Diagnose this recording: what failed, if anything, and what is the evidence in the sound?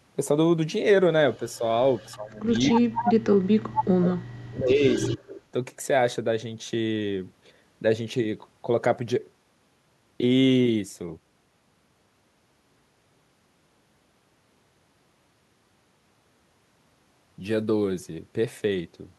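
Call processing is where this fails. A delayed copy of the speech, trailing the original by 234 ms, appears at 1.34–1.58, 1.95–2.16, 2.52–3.13, 4.11–4.16 and 4.84–5.4 s. It ranges from about 40 dB below the direct voice in the first scrap to only about 5 dB below at 2.52 and 4.84 s. This is an echo leak, likely from a far-end loudspeaker whose microphone pickup was not fully cancelled by the echo canceller, so residual echo was returned.

The same call-processing stage shows speech suppressed in double talk. There is a brief, shallow dip of about 5 dB at 1.58–1.62 s, then a much longer disturbance from 2.15 to 4.82 s. In that span the voice is pulled down by as much as about 35 dB, for roughly two seconds in total, overlapping the strongest echo at 2.52–3.13 s. This is likely the canceller's suppressor failing to separate the near talker from loudspeaker echo and attenuating both together.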